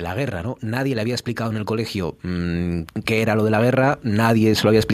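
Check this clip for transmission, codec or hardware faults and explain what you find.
One fault stands out: automatic gain rising. From 0.31 s to 4.89 s, the automatic gain control treats the input as too quiet and keeps pushing its gain up by about 10 dB in total. The speech and the background noise swell together steadily across the clip.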